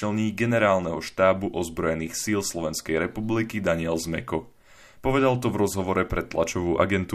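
Nothing technically wrong turns up in this speech recording; there's no fault here to point to or trace back to a cause.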